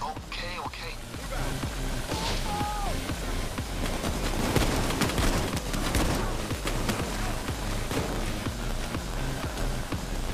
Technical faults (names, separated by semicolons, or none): buffer tearing